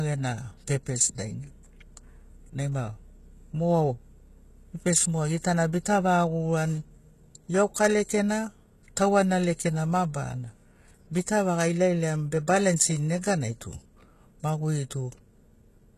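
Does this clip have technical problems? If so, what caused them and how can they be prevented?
Yes. Throughout the speech, the encoder was most likely running HE-AAC compression at a very low bitrate, consistent with about 16 kbps. It coded only the lower spectrum and rebuilt the treble by copying bands upward. The damage is heavy: s sounds turn gritty and lispy, and nothing survives above 12.3 kHz. Encoding at a higher bitrate, or with standard AAC without band replication, would prevent it.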